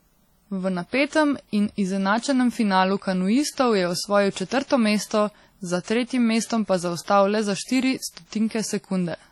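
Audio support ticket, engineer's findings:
Whole speech clip: ringing, washy smear with hiss that breathes along with the signal, content gone above 19.6 kHz. Likely WMA compression, heavy damage fitting a low bitrate near 32 kbps; long transform blocks spread quantisation noise, weak lines zeroed.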